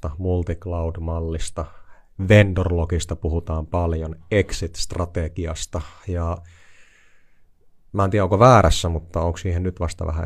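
No audible technical faults.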